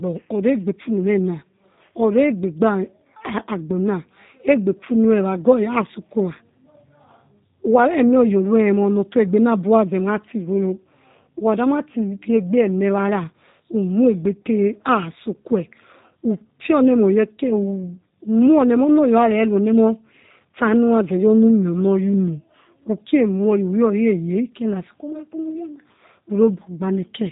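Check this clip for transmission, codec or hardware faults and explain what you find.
The whole clip has gone through a G.729 codec. That's the one fault, and it runs throughout. The speech is rebuilt from a vocal tract filter, pitch prediction and a few pulses per 10 ms frame, so it comes out plainly rough and slightly synthetic, with nothing above about 3.8 kHz. That fits an 8 kbit/s G.729A link.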